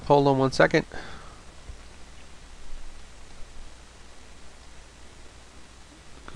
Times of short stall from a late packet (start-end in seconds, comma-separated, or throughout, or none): none